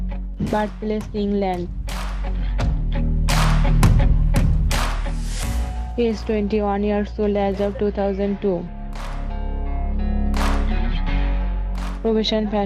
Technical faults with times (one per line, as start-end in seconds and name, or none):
none